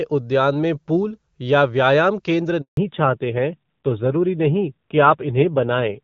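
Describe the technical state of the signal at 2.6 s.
At 2.61 s the speech fades out within a few tens of milliseconds and drops to silence for about 160 ms, resuming at 2.77 s. This is a handover gap: while the call switched networks, no speech frames arrived, so that stretch is simply missing.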